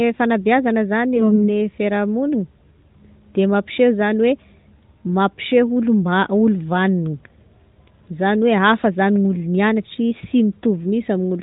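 Around 1.16 s to 1.49 s the speech turns hoarse and gargly for about a third of a second. That's AMR bit errors: a weak link flipped the less protected bits in a few frames, at a rate of roughly one bit in ten. The checksum on the critical bits still passed, so the decoder didn't discard those frames. It placed its excitation pulses wrong and got the finer gain and spectral values off. Pitch and loudness hold up roughly, but the texture goes scratchy. Underneath, the AMR-NB narrowband sound stays capped at 4 kHz, coded in its top 12.2 kbps mode.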